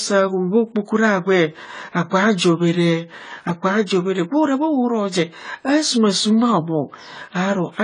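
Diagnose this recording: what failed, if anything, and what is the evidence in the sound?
The damage sits at the codec stage, and it runs through the whole clip. The speech sounds dull and smeared, with a warbly, fizzy edge on sibilants and held vowels, and there's nothing at all above 10 kHz. That's likely AAC compression, AAC-LC starved of bits, which fits something around 24 kbps. At that rate the encoder drops the upper band entirely and quantises what's left so coarsely that gaps and swirly texture show up in the spectrum.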